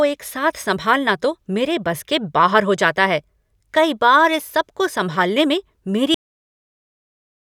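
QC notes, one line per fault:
6.14–7.46 s, cut-off end: The final stretch of buffers never reached the output, so the recording stops writing at 6.14 s while the speech is still mid-sound, just after "सबको संभालने में". Instead of trailing off or decaying naturally, the audio drops straight into digital silence, and that dead quiet holds for the remaining 1.3 s. The sentence sounds chopped off rather than finished.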